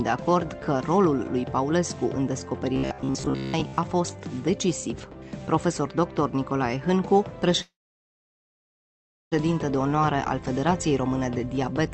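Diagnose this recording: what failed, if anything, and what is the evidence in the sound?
Between 2.74 and 3.78 s the sound turns into a rigid metallic buzz at 66.8 Hz: robotic sound from repeated short buffers. A starved buffer likely kept repeating roughly 15 ms chunks for most of the span. On a spectrogram this shows as evenly spaced harmonic lines; the waveform shows identical repeating cycles.

From 7.61 to 9.34 s there is a call audio freeze at the network and jitter buffer stage. Delayed packets likely drained the buffer, so a brief fading fill gives way to about 1.6 s of silence. The sound then resumes where it stopped, pushed 1.7 s later, with nothing lost. A spectrogram shows a blank gap, and the waveform a flat line.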